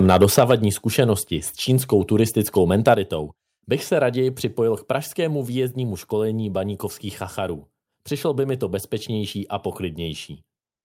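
Speech with a couple of harsh, crackly peaks: from 0.05 to 0.51 s and again at 2.87 to 2.89 s, the tops get sheared off, around 7 dB and then 3 dB over, which sounds like microphone overload with too much input gain. Within or right after each burst, at 0.39 s and 2.94 s, everything drops abruptly by 4 dB and then 6 dB. That's likely the microphone volume stepped down by the call software reacting to the clipping.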